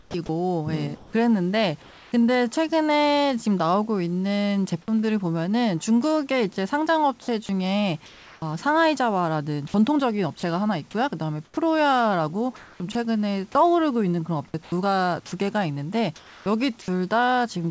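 It's a speech clip over a call path with the familiar signs of discontinuous transmission. Comfort noise in place of the background shows up from 0 to 2.1 s, 7.46 to 8.42 s, 14.63 to 14.72 s (about 4 dB quieter) and 16.16 to 16.46 s (about 2 dB quieter): the real room noise turns flat and featureless, likely because the sender stopped transmitting and the receiver synthesised filler. Onsets are clipped by the voice detector at 0.12 s and 4.86 s, each losing about 20 ms, so speech starts abruptly, likely from a slow detector. At 7.46 s, sound is dropped by the voice detector: roughly 20 ms of speech gives way to comfort noise, likely because the sound was mistaken for background. Between 10.40 and 12.95 s the sound is chopped by the voice detector, with edges flickering to fill, likely from the detector toggling on and off repeatedly. Nothing reaches above 8 kHz, consistent with the G.722 codec in the path.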